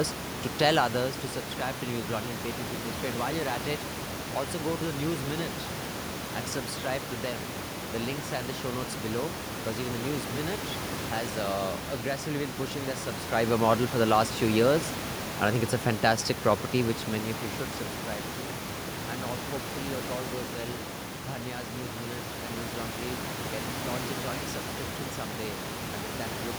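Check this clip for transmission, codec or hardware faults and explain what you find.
Nothing in the transmission, codec or hardware chain is at fault; the gradual level rides are deliberate fader moves, and the background noise sitting about 8 dB under the speech belongs to the room the microphone was in, not to the system.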